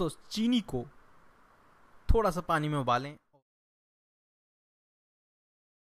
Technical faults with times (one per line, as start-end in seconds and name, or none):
none